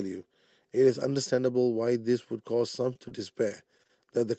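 Short concealed packet loss hits this speech clip at 2.93 to 2.97 s and again at 3.09 to 3.12 s. Each time about 20 ms of audio failed to arrive, and the receiver extended the preceding sound to bridge it, leaving a brief smear or wobble before the real signal resumes. Repeated packet loss (robotic sound) follows from 3.48 to 4.18 s: five short dropouts, the longest about 23 ms, are each patched the same way, so roughly a seventh of that stretch is filled-in sound and it turns choppy. Throughout, the top end stops near 8 kHz, which fits an Opus call codec running at around 32 kbps.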